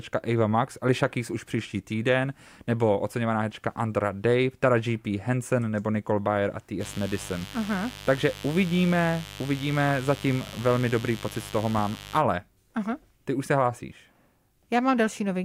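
From 6.79 s to 12.23 s a mains buzz sits under the speech, a steady, raspy drone built on 50 Hz, somewhat below the speech. Something like a dimmer, a rectifier or a missing cable shield has let sharp switching spikes into the line twice per mains cycle, so harmonics stack up well into the kilohertz range. That bright, rasping edge is what separates it from a plain hum, which would be a smooth low tone.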